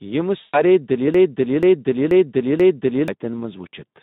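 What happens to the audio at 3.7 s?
The Speex codec, active across the whole clip and not just at 3.7 s, runs at a low setting consistent with about 11 kbps. Too few bits for its CELP excitation leave the speech noisy and hoarse, and it sits in a narrow 150 Hz to 3.7 kHz band.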